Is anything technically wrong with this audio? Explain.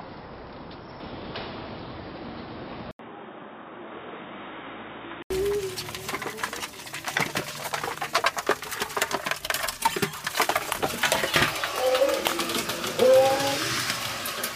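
Yes. From 2.91 to 5.30 s, the sound turns dull and boxy, then clears again. This is likely an input switched to a poorer device. The system seems to have moved to another microphone or a headset's call profile mid-recording. That path passes nothing above 3.8 kHz, so the top end vanishes. A gap of 80 ms marks the switch. The level drops by roughly 5 dB. A faint new background noise also appears, well below the signal.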